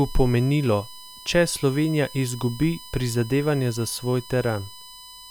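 Current drawn by the USB bus in 1 ms frames is leaking into the recording path through power or ground, so this speech clip carries USB whine from start to finish: a fixed-pitch tone built on 1 kHz, strongest at its 5 kHz harmonic, sitting roughly 20 dB below the speech.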